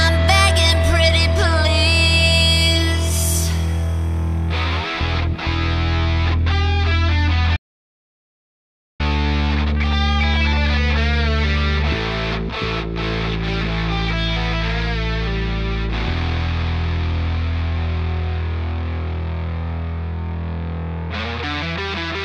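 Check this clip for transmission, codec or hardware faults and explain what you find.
There is one fault, an audio dropout to silence from 7.57 s to 9.00 s. For about 1.43 s the sound stops dead, and the gap is silent with no room tone or background left underneath. The likely cause is the input signal being lost, through a disconnected device, a broken link or an accidental mute, while recording carried on writing silence. The sound is cut off mid-flow and resumes abruptly, and whatever occurred in that span is gone.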